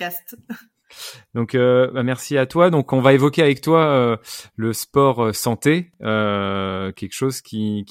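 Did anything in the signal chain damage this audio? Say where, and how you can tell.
Yes. From 4.96 to 6.96 s, a faint, steady ticking runs under the speech at a little under ten clicks per second, well below the speech level. That is Wi-Fi interference in the analogue wiring: a nearby Wi-Fi radio's beacon, repeating every 102.4 ms, is picked up by the audio circuit and rectified into audible pulses. The regular spacing of the ticks, matching the beacon interval, identifies the source.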